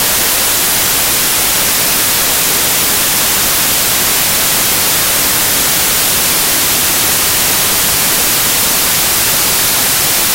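Samples built from the wrong bytes throughout the audio: misassembled bytes promote the rapidly changing low bits, producing loud, harsh broadband noise.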